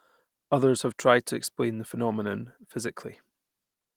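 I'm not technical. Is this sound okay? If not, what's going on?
Yes, there's nothing wrong with this sound.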